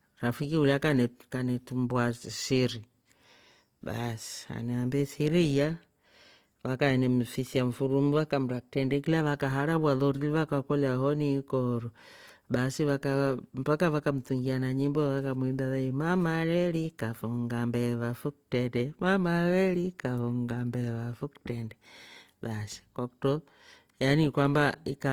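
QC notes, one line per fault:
throughout, Opus compression: the speech sounds plainly rough and grainy, with clean tone turning noisy, yet it swirls less than MP3 would and the top end stays open to 20.2 kHz. This is likely Opus music-mode coding starved of bits, fitting about 24 kbps, which fills bands with noise.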